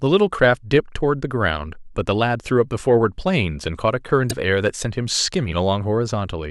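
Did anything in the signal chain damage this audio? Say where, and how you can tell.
Yes: damaged data in the compressed stream, a brief blip from 4.27 to 4.33 s. Corrupt codec frames made the decoder lose sync and resynchronise on the next header.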